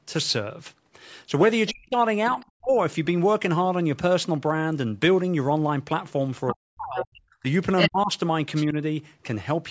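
Around 1.67 to 1.71 s there's a quick scrap of the other side's voice leaking through, about 15 dB under the talker, most likely loudspeaker echo the echo canceller didn't fully remove. Then from 1.71 to 2.75 s the talker gets chopped: about half a second in total drops by as much as roughly 40 dB. That's likely speech suppressed in double talk, where the canceller couldn't tell the talker from the echo while both spoke and turned everything down. Inside that stretch, at 2.40 to 2.45 s, a much fainter bit of leaked far-end voice sits about 35 dB down. The same pattern comes back later. Leakage runs from 6.48 to 7.05 s at about 15 dB below the talker, and suppression from 6.53 to 8.10 s chops out about a second of speech with similarly deep dips. Within that, at 7.77 to 7.90 s, the leaked voice comes through as loud as the talker. One last fragment turns up at 8.55 to 8.64 s, about 20 dB down.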